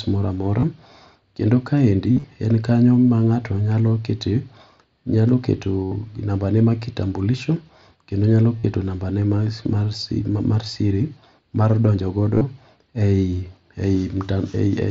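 Brief buzzy, held-level patches with a slight warble on recovery interrupt the speech at 0.60 s (just after "moro amora"), 2.12 to 2.24 s, 5.84 to 5.92 s, 8.60 to 8.64 s and 12.35 to 12.41 s. This is concealed Bluetooth headset packet loss: voice packets over the mSBC wideband link were dropped, and the receiver filled each gap by repeating the best-matching recent stretch of waveform. The 2.12 s cluster is scattered over about 120 ms.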